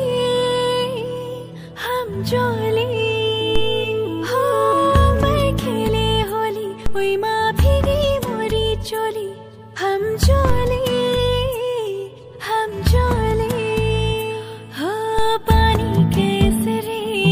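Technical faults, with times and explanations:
3.56, 6.86, 10.50 and 15.19 s, DC step: the waveform's zero line jumps suddenly by about -9 to -10 dBFS, then decays away as a 2 Hz high-pass filter pulls it back. Each jump is heard as a low thump or click while the sound continues unchanged.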